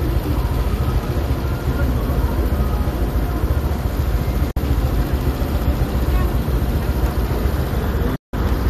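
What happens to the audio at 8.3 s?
At 8.3 s the sound is inside a digital broadcast dropout running from 8.15 to 8.34 s. The receiver lost valid frames and muted, fading out over about 8 ms into roughly 170 ms of true silence. That muting, rather than smeared or repeated concealment audio, marks a broadcast dropout.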